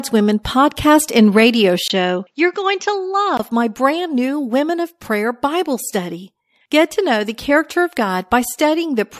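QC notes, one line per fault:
0.43 s, pre-echo: a short hiss, about 11 dB up, smears 19 ms ahead of a sharp attack. This fits a roughly 36 ms codec block, with no short blocks.
1.88 to 3.39 s, input switched to a poorer device: after "and radio", a 20 ms gap. The sound then turns dull, with nothing above 7.6 kHz, and a little quieter until "my brand new". This is likely a poorer microphone.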